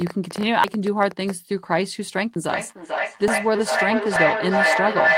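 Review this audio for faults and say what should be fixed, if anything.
A train of clicks runs from 0.02 to 1.31 s: around fifteen irregular pulses, about 9.6 per second, peaking roughly 10 dB above the speech. On a spectrogram they show as thin vertical broadband lines, and on a waveform as sharp spikes. The likely cause is interference from nearby equipment or a faulty connection or power supply. Moving cables and devices apart or replacing the faulty connection or power supply would prevent it.

Feedback echo between two devices starts at 2.49 s and lasts to the end. The speech returns about every 400 ms and builds to about 3 dB above the original, so the repeats pile up rather than dying away. On a spectrogram this looks like stacked, smeared copies of each syllable. Keeping only one device joined to the call in the room, or muting the second one's speaker and microphone, would prevent it.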